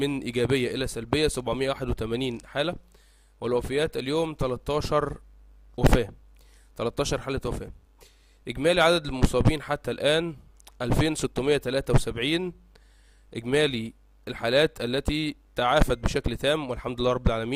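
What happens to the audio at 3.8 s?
Nothing goes wrong at 3.8 s; the audio plays through that moment intact, with no dropout, click or distortion.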